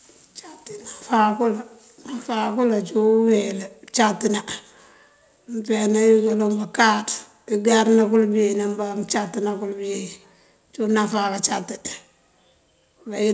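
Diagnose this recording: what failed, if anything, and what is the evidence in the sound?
Nothing failed: the speech carries the normal signature of a wideband call chain, with the microphone processing's bass roll-off and a spectrum that stops at 8 kHz, which fits a G.722-style codec on a working call path.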